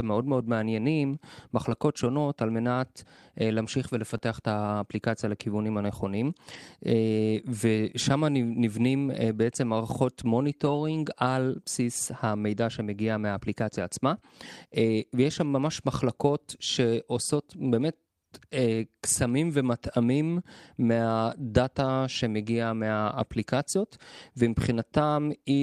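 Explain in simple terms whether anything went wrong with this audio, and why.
Brief rough, noisy patches appear at 1.65–1.75 s, 4.09–4.15 s, 6.49–6.55 s and 10.65–10.67 s. These are lost packets rebuilt from error correction: the next packet carried a rougher spare copy.

At 4.17–4.21 s there is a tiny smear, a short concealed packet loss. About 20 ms arrived too late, so the player stretched the preceding sound to cover the gap.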